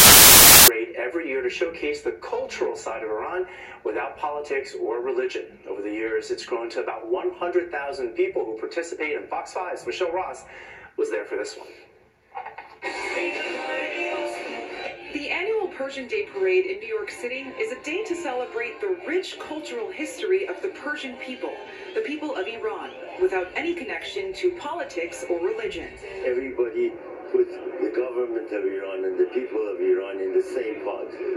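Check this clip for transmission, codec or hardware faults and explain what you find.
There is one fault, at the very start. From 0.00 to 0.68 s the audio is replaced by loud, harsh broadband noise. These are samples built from the wrong bytes: the reader assembles each sample from misaligned or swapped bytes, so the rapidly fluctuating low-order bits land in the most significant position and dominate every value, turning the signal into broadband hiss.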